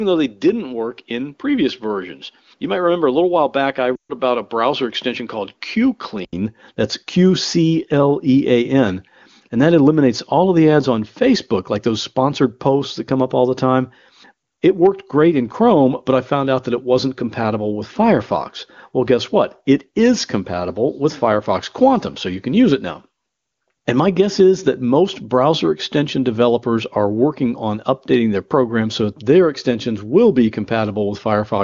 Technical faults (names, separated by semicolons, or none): input switched to a poorer device; lost AMR speech frames